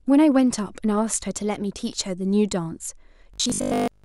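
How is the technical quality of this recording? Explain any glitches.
The recording has one glitch near the end: from 3.34 to 4.04 s the speech turns into robotic sound from repeated short buffers. The likely cause is late-arriving audio, with roughly 20 ms of sound replayed over and over while most of the real audio is dropped. The repeats impose a rigid 50 Hz metallic buzz that still loosely tracks the speech.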